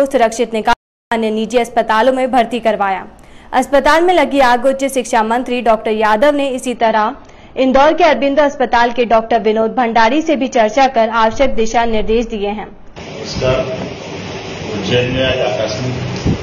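At 0.73 s the audio drops out to silence for about 0.38 s, returning at 1.12 s. The gap is silent with no room tone, unlike a natural pause, and the likely cause is a lost input or link while recording continued. From 6.76 s to the end, an adaptive stream at a lower bitrate takes over. The switch is sudden and gapless, and nothing survives above about 6.9 kHz. Rising codec artefacts set it apart from a simple low-pass filter, and the sound fits a drop from roughly 96 to 24 kbit/s AAC.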